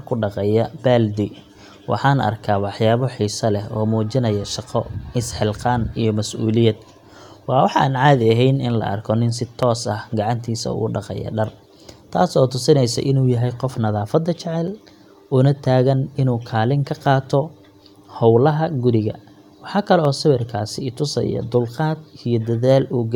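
Dropped samples, likely a handful at a time, break the stream five times in this speech clip, at 4.16, 9.63, 10.60, 14.68 and 20.05 s. Each gap is only a fraction of a millisecond, far too brief to remove any sound, but the waveform jumps straight from one value to a later one. Every jump is heard as a single sharp click and shows as a thin vertical line through the spectrum.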